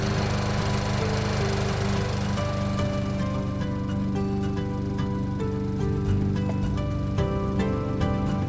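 No faults are audible.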